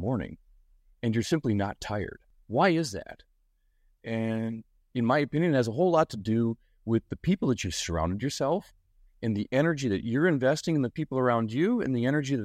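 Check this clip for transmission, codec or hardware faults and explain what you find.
Checking this clip turned up no faults to explain.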